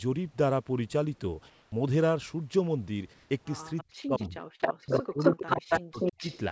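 Discontinuous transmission likely paused the sender during the gaps at 1.50 to 1.72 s and 3.14 to 3.30 s, and the receiver filled them with comfort noise in place of the background. The real room tone, sitting about 37 dB below the loudest speech, turns into a smooth, featureless hiss at the same level before the speech resumes.

At 4.02 s the voice detector likely mistook part of the sound for background and stopped sending. This sound dropped by the voice detector lasts 20 ms, and synthetic noise briefly replaces the speech.

From 4.70 to 6.18 s both ends were talking. The echo canceller likely could not tell the talker from the loudspeaker return, so it turned the signal down. This speech suppressed in double talk pulls the speech down in pieces for about a second in total, dipping by as much as roughly 40 dB.

In the same stretch, a loudspeaker on one side likely let sound past its echo canceller, producing echo leak at 4.93 to 5.03 s and 5.19 to 6.38 s. 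A copy delayed by 268 ms comes back about as loud as the original, in the band-limited G.722 signal, which has nothing above 8 kHz.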